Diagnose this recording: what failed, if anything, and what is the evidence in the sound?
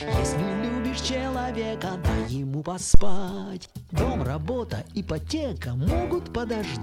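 A phantom power thump sits in the analogue input stage. At 2.94 s a deep, low thud lands and dies away by 3.33 s. Its peak reaches about -1 dBFS, close to clipping the input. The bulk of it decays in roughly 87 ms. The cause is a supply being switched while the input was live. That voltage step passed through the coupling capacitors as one heavy low-frequency pulse.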